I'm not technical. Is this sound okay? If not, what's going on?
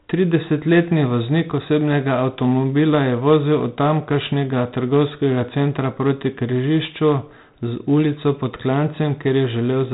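No. The speech carries 4-bit ADPCM compression from start to finish. This method saves space by storing each moment of sound as a small step away from a guess, with only sixteen possible steps each time. The guesses miss, so a gritty hiss rides along with every loud syllable, and sharp consonants come out rough. Nothing above about 3.8 kHz survives either, which makes the whole clip sound muffled, like an old phone line.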